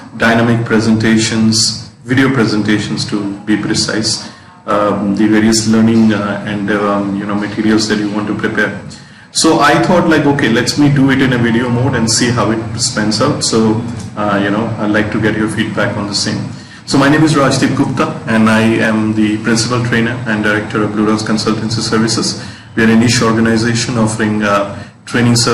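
No technical faults can be heard anywhere in the audio; the signal holds steady throughout.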